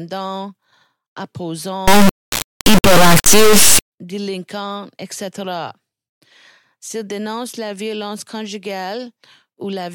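A speech clip with an integer read as float fault from 1.88 to 3.92 s, ending just before "délinquants etc". The 32-bit integer samples are decoded as 32-bit floats. The speech turns into a harsh, extremely loud buzzing square wave, slamming between silence and the clipping limit.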